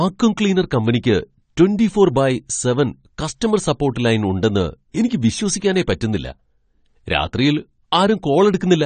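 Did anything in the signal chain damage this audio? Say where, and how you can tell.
Yes. The damage happened at the codec stage and runs through the whole speech clip: the sound is dull and smeared, with a fizzy, warbling edge on sibilants and held vowels. This is likely AAC compression, with a character that points to AAC-LC at a low bitrate, around 32 kbps. A spectrogram would show a hard ceiling with nothing above 9 kHz, and patchy, blocky gaps in the upper bands where the encoder discarded or approximated detail.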